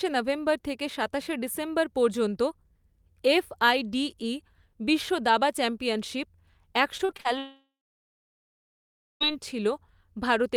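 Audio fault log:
6.97–7.27 s, repeated packet loss (robotic sound): five short holes open in the speech over about 0.3 s, the longest 40 ms, and each is patched by stretching out the sound just before it, so close to half of this stretch is filler. The quick patch-and-resume cycle gives a choppy texture. Unlike a single long dropout, the real audio keeps breaking through between the gaps rather than disappearing for good.
7.39–9.22 s, long network dropout: about 1.8 s of audio never arrives. The receiver briefly carries on the last sound as a fading buzz or hiss, then for roughly 1.5 s there is only silence. This is likely a network outage. What sets it apart from the choppy stretch just before is one unbroken hole with no fragments of real sound inside it, and speech resumes afterwards with the lost portion simply gone.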